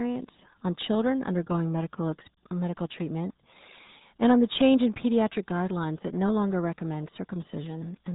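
The RealAudio 14.4 codec damages the speech from start to finish. It squeezes the signal into a budget that fits about 8 kbit/s, discarding everything above 3.8 kHz and coarsely modelling what remains. The speech comes out muffled and gargly, with heavy codec smearing throughout.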